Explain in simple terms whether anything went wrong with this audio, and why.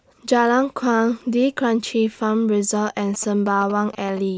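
From about 3.0 to 4.19 seconds, a galloping dit-dit-dit of short buzzes sits quietly beneath the speech. These are GSM signalling bursts: a nearby 2G phone was exchanging radio signals with the network, and the audio equipment picked them up and turned them into a 217 Hz buzz.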